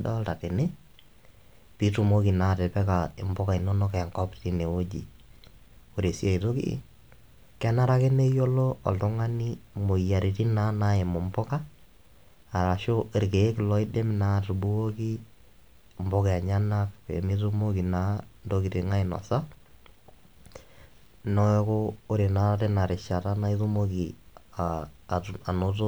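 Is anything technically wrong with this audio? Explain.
No, nothing technically wrong stood out on listening to this speech recording.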